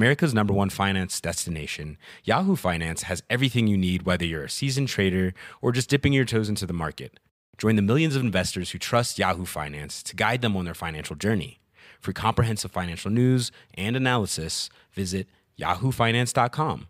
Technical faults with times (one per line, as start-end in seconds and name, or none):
none